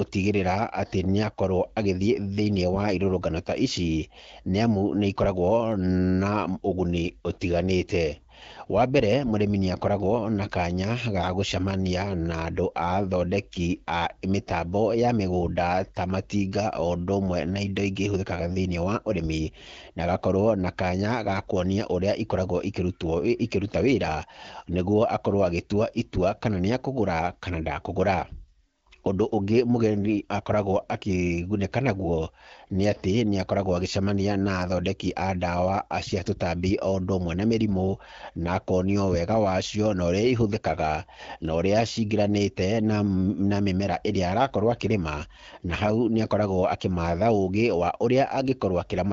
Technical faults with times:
45.70-45.90 AMR bit errors

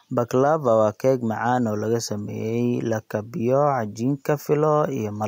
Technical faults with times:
0.00-5.27 gain pumping

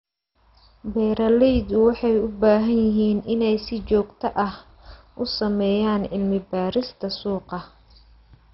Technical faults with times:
0.00-8.54 MP2 compression

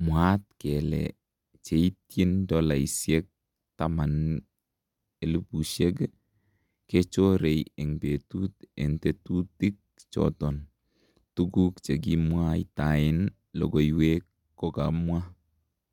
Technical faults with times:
none

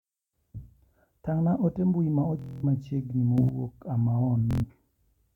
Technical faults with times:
2.39-2.64 Bluetooth stutter
3.38-3.49 sudden gain jump
4.51-4.64 Bluetooth stutter

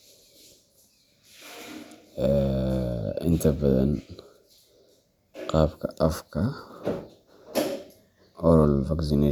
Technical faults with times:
none

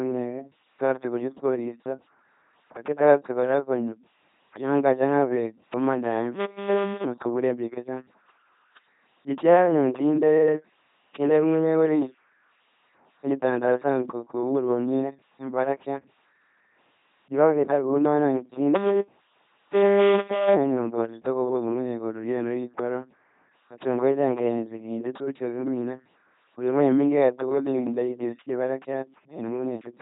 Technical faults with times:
0.00-30.01 LPC-10 vocoder
18.75-20.55 robotic sound from repeated short buffers

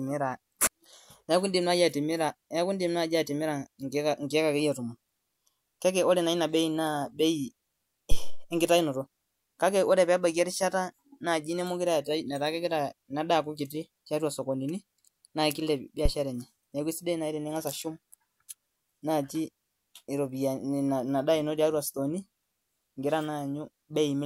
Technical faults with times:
8.11-8.52 phantom power thump
16.05-16.11 phantom power thump

